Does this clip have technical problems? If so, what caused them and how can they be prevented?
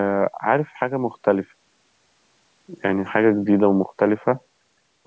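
No, this speech has no audible technical problems.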